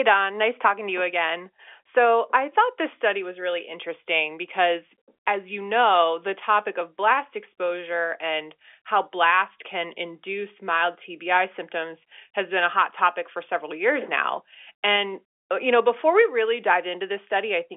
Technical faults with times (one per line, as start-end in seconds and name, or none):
none